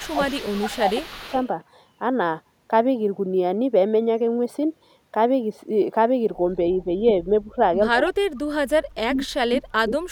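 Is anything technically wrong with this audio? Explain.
Yes. From 0.0 to 1.47 s a faint, delayed copy of the speech trails the talker by 175 ms, roughly 20 dB quieter. This is likely echo leak: a far-end loudspeaker's sound reached its microphone, the echo canceller left part of it behind, and that residue was sent back.

The speech also dips or drops out at 0.0–0.19 s, 0.35–1.27 s, 7.24–7.58 s, 7.93–8.34 s and 8.73 s to the end. Some dips are slight, while the deepest near 8 s and later nearly silence it. This is likely speech suppressed in double talk: with both sides talking, the canceller treated the talker as echo and turned the speech down.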